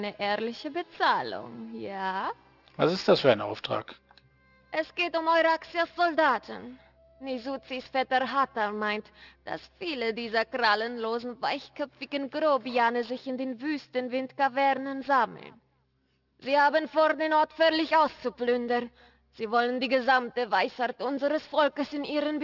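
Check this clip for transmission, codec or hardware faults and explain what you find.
There is one fault, present throughout the clip. Aliasing: high content turns gritty and metallic, packed up against roughly 6 kHz, because the rate was lowered unfiltered (fits 12 kHz), folding components back about 25 dB down.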